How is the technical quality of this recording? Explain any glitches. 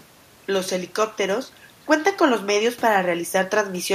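No glitches can be heard: the speech comes through as a continuous signal with no dropouts, clicks, distortion or other interruptions at any point.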